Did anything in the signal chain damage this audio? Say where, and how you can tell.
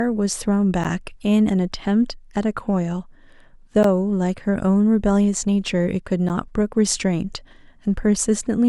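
Yes: blocks of digital silence at 0.84, 3.83 and 6.29 s, each 11.6 ms, short enough to be heard as a tick or dip. That fits 512-sample buffer underruns in the driver.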